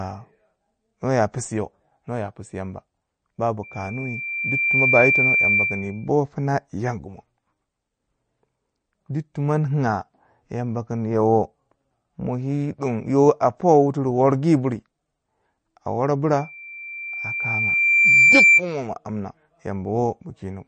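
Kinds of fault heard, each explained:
MP3 compression: The speech sounds like it likely went through a low-bitrate MP3 encoder. Nothing is present above about 9.1 kHz, and the damage is plainly audible. Sibilants sound watery and swirly as weak frequency lines drop in and out between frames, and consonant attacks are smeared.
Loudspeaker feedback squeal: The microphone picks up its own loudspeaker, and the loop's gain exceeds one at 2.4 kHz, so that tone builds on itself. It happens twice: from 3.63 to 6.08 s it swells over about a second to roughly 5 dB above the speech, and from 16.37 to 18.63 s it builds over about two seconds to roughly 10 dB above it.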